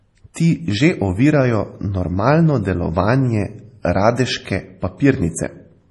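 Right from the start the whole clip has a watery, swirly quality, with s sounds going metallic and chirpy and nothing above 11.4 kHz. That's most likely MP3 compression under heavy strain: the encoder chops the treble and drops weak detail, which fits a low bitrate of about 32 kbps.

Around 0.34 to 0.36 s there's a brief hiss sneaking in just before a sharp attack, and the attack itself sounds smeared. That's pre-echo: the codec spreads its noise across a whole block, so about 24 ms of it lands before the onset.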